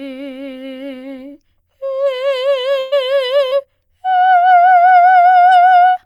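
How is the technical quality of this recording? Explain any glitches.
The music has two network-related dropouts close together, both near the middle of the roughly 6-second clip.

Burst of packet loss, 2.79 to 2.94 s: about 120 ms of the stream never arrived in time, probably several consecutive packets. The receiver covered the hole by extending the last sound it had and turning it down as the gap went on, so there's no silence. Instead the music seems to hang and fade for about a tenth of a second, then jumps ahead with that stretch missing.

Short concealed packet loss, 3.50 to 3.53 s: a much smaller hole, about 20 ms, reached the decoder too late. The receiver filled it by continuing the preceding sound for about 17 ms and then blended back into the real audio. It's heard as a brief smear or wobble rather than a clear break.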